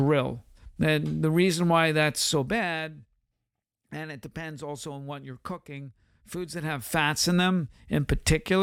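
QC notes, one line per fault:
6.32–7.10 s, zipper noise: after "on what you're cooking" the level changes roughly 15 dB in coarse unsmoothed steps, about 100 a second, so it ticks audibly.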